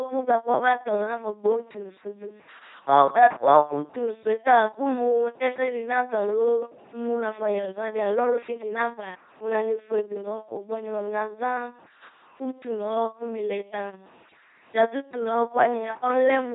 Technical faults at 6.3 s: LPC-10 vocoder

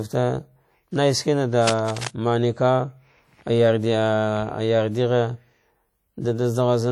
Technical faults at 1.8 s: WMA compression; cable scratch noise

